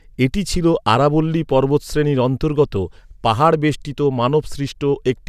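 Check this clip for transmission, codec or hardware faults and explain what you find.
Nothing in the speech signal points to a transmission, codec or hardware fault, with continuous audio and no disturbance in level, timing or bandwidth anywhere along its course.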